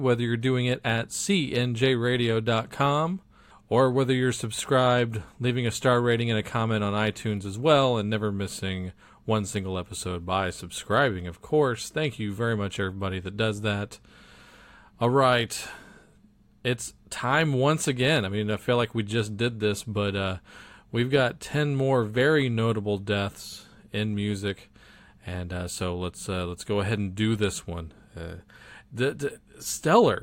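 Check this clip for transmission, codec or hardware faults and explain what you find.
No faults of that sort are audible here.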